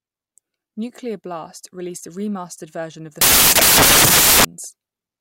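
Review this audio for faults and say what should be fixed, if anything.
From 3.21 to 4.45 s, after "version of the", samples built from the wrong bytes turn the audio into loud, harsh broadband noise, because each value's fast-changing low-order byte is read as its high-order part. A spectrogram shows a flat broadband wash, and the waveform becomes a dense block. To prevent it, decode with the correct byte order and sample alignment, verified against the file header.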